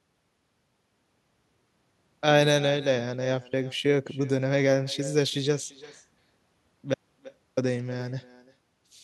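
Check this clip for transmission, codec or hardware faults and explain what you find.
Two faults are audible: an echo running through the whole recording and one short dropout near the end.

Echo with no canceller, throughout: the far end's loudspeaker feeds its microphone and nothing subtracts it, so the speech returns about a third of a second later, around 20 dB quieter, as a thin shadow trailing every phrase.

Audio dropout to a faint residue, 6.94 to 7.57 s: the signal vanishes abruptly for about 0.63 s, leaving only faint hiss far below the speech level, then snaps back. The likely cause is a lost stretch of signal while the downstream path stayed live.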